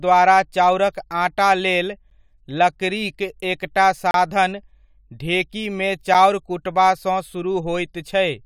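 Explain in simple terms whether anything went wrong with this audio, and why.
Gap between stream segments at 2.10 s, 4.11 to 4.14 s and 6.14 s: the 2-second chunks don't meet exactly, so the player inserts brief, sharp-edged silences.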